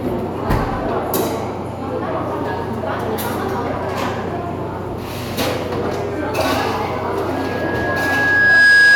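Loudspeaker feedback squeal starts at 7.34 s and runs to the end: a microphone is picking up its own loudspeaker, and at 1.7 kHz the loop gain exceeds one. That single tone swells over roughly a second and a half, finishing about 10 dB above the sounds.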